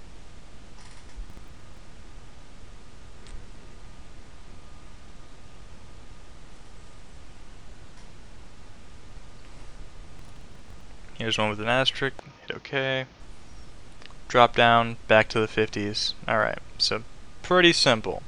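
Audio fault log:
1.29–1.80 s and 10.19–10.82 s, processor overload crackle: a burst of gritty crackle tears across the sound for about half a second each time, then stops cleanly. The processor repeatedly failed to finish its short audio buffers, each around 10 ms, before their deadlines. Dozens of buffers were dropped in each stretch rather than held, so the audio skips forward again and again, and every hard-edged join adds a click to the crackle.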